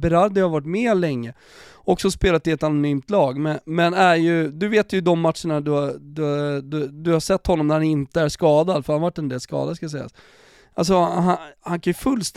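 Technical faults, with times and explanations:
No technical faults can be heard in this speech recording; the signal holds steady and continuous throughout, with nothing in its level, timing or frequency content standing out as a problem.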